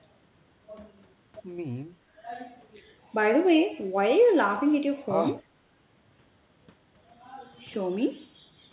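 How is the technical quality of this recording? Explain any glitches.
The recording has two brief dips in the background sound. The audio is band-limited, with nothing above 4 kHz, which fits a narrowband G.711 A-law call stream.

Background gated by the echo canceller, from 2.00 to 2.21 s and from 5.43 to 5.70 s: the canceller attenuated the microphone while far-end playback was detected. The room tone drops by about 12 dB and then about 15 dB, for roughly a fifth and three tenths of a second, then recovers.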